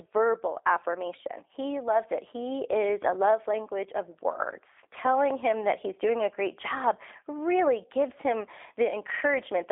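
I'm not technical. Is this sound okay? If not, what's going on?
No. The speech passed through a G.729 codec, a phone-call system that squeezes the voice into very little data by rebuilding it from a rough model of how a voice is shaped and pitched, rather than sending the real sound. Throughout the clip this makes the speech sound slightly rough and artificial, and the line keeps only a narrow telephone range, with nothing above about 3.7 kHz, so it sounds thin and muffled.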